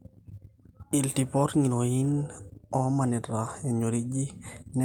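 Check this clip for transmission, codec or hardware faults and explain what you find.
Nothing stood out on listening to this speech recording.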